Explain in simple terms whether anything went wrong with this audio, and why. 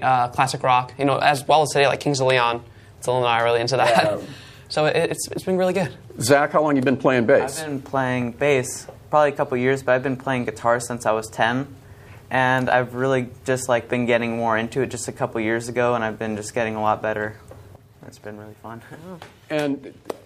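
At 17.76 s the sound suddenly gets quieter and stays that way until the end, with nothing else about it changing. This is likely one channel drops out: one of the two stereo sides was lost, so the combined single-channel mix lost part of its level.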